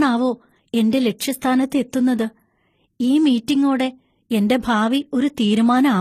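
From start to finish the speech has nothing above about 14.9 kHz, and two kinds of codec artefact are stacked on top of each other. That points to transcoding between lossy codecs, likely a low-bitrate MP3 pass re-encoded as low-bitrate HE-AAC, so the second codec ends up spending bits on the first one's damage.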